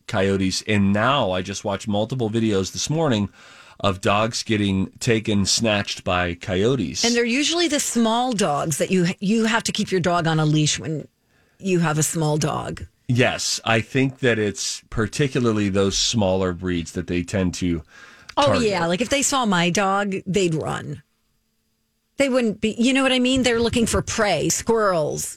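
At 24.5 s the speech skips ahead, likely a dropped buffer (overrun) where about 10 ms of samples were overwritten before being read. The waveform shows an abrupt discontinuity with no gap, and the spectrogram a thin vertical broadband line.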